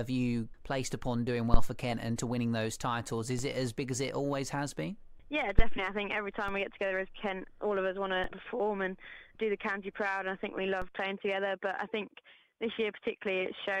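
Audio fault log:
1.54–1.72 s and 5.59–5.84 s, phantom power thump: A supply switched on a live input pushes a voltage step through the coupling capacitors, giving a deep thump with a body lasting about 0.2 s and a tail decaying over roughly 41 and 56 ms. That audible duration sets it apart from the instantaneous DC steps.
3.39, 6.48, 8.24 and 10.82 s, DC step: The waveform's zero line jumps by about −31 to −30 dBFS, then drains away through a high-pass near 5 Hz. Each is a single instantaneous low thump or click while the sound carries on unchanged.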